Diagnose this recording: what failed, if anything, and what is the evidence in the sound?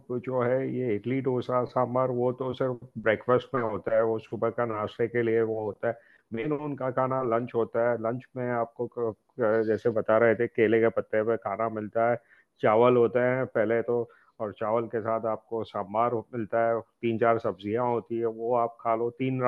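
Nothing in this speech recording points to a failure at any stage of the chain. No event can be heard that would tie a problem to wiring, conversion, processing, transmission, storage or playback.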